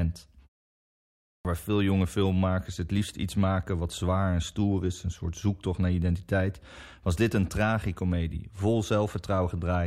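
At 1.0 s, after a pause of about 0.6 s, the output shows a clipped start after a pause: the playback device had gone idle in the silence and took roughly 0.45 s to wake and lock again, so the sound until 1.45 s is swallowed. The phrase "waar veel jonge filmmakers" then begins abruptly out of silence, missing its opening sounds.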